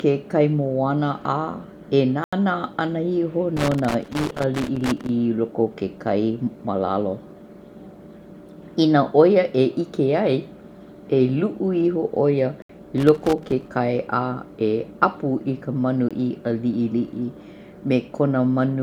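It's a speech recording with two separate problems. First, there are three blocks of digital silence, where the audio drops straight to silence and comes back with no fade. The longest runs from 2.24 to 2.33 s, about 85 ms, which fits a 4096-sample block at 48 kHz. The next runs from 12.62 to 12.69 s, around 72 ms. A short one at 16.09 s, about 21 ms, fits a 1024-sample buffer. That pattern points to the playback or processing side not filling its output buffer in time. Second, there's loose connector crackle: irregular scratchy bursts from 3.57 to 5.09 s and again from 12.98 to 13.68 s. It sounds like a worn or dirty contact making and breaking as something moves, chopping the signal into that rough, intermittent texture. The second burst lands just after the 12.6 s dropout, so that stretch gets hit twice in quick succession.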